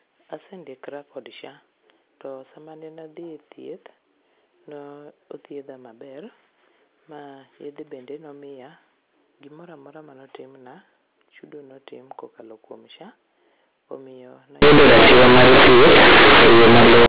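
Telephone-band speech, carried as G.711 A-law at 8 kHz with nothing above 4 kHz, breaks down from 14.62 s to 17.06 s into loud, harsh buzzing distortion with heavy noise filling the gaps. This is companded audio read as linear: A-law bytes played directly as 8-bit samples with no expansion. Every sign change then jumps across roughly half the output range, so quiet passages come out as loud as peaks and the waveform is badly mangled.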